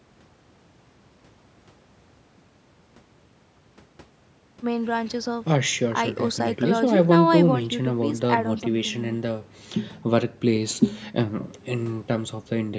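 No faults heard; the speech has passed through ordinary call microphone processing, which trims the lowest bass and leaves nothing above 8 kHz, as expected for that path.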